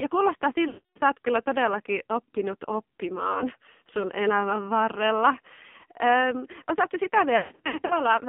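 The AMR narrowband mobile codec runs throughout. Heavy low-bitrate coding, which fits about 5.9 kbps, leaves buzzy, synthetic speech confined to roughly 150 Hz to 3.6 kHz.

Lost AMR speech frames come from 0.68 to 1.02 s, before "oot kyllä todellakin oppinut", where about 280 ms of concealment drags the sound out and fades it. Shorter dropouts follow at 3.32 to 3.47 s, before "sun elämän varrella", and at 5.78 to 5.84 s, after it, each a brief dip or warble. Scattered losses from 7.38 to 8.0 s dip and warble repeatedly as the decoder reuses stale settings.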